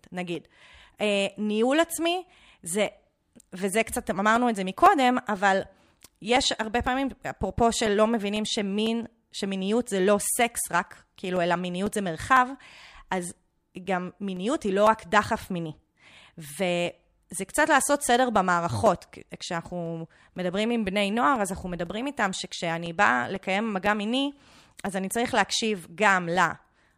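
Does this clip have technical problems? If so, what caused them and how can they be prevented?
Yes. Periodic USB or driver dropouts run from 0.35 s to 26.86 s, a tick every 0.5 s, about fifty in all. At that fixed interval something blocks the USB bus or the audio driver, and a very short stretch of the speech, around 2 ms, is lost and replaced by silence. Each gap is heard as a small click while the speech is present. To prevent this, stop the interfering background task or update the driver, and connect the interface to its own USB port.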